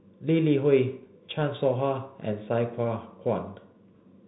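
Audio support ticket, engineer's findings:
Bluetooth CVSD headset codec damage, whole clip, plainly audible: band capped near 4 kHz, scratchy s sounds, granular hiss under speech, distortion on loud high content. Probable cause is headset link audio. One-bit delta coding at 64 kbit/s, adaptive step too slow for fast rises.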